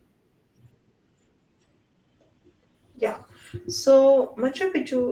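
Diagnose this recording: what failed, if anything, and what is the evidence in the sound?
A call bitrate drop hits at 0.72 s and lasts to the end of the clip. The speech goes from full-band to muffled, with the top end gone above about 8 kHz, and it picks up a rough, watery texture that sits at its worst for about 2 s. That points to the bandwidth estimate collapsing and the encoder being pushed from roughly 32 to around 14 kbps, coding coarser and trimming the highs. It never recovers before the clip ends.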